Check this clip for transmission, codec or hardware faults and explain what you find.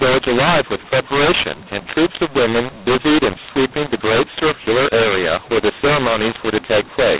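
There's one fault, and it runs the whole way through: a mu-law and A-law mix-up. The telephone audio was encoded with mu-law but decoded as A-law, so the companding curves don't match. Levels come out scrambled, the speech sounds harsh and distorted, and pauses fill with noise instead of going quiet. The underlying G.711 telephone coding is audible too: nothing gets through above 4 kHz, which fits an 8 kHz sample rate.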